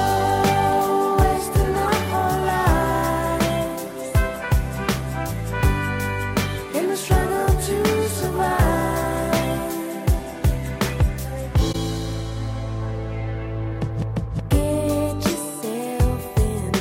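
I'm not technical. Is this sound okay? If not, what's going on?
No. There are three quick glitches, at 1.85 to 1.89 s, 5.85 to 5.88 s and 11.72 to 11.75 s. Each is a corrupt frame decoded: a damaged chunk of compressed data got played anyway, so you hear a brief chirp or blip. The middle one is much fainter.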